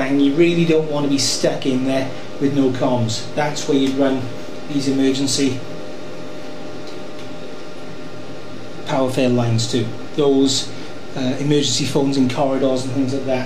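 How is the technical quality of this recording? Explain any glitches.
The recording carries one technical fault, present for its full length rather than as a glitch at any moment. DC offset, throughout: the entire waveform sits shifted from zero by a constant amount, at about -26 dBFS. This isn't audible as a sound, but it eats into headroom and appears as steady energy at the very bottom of the spectrum.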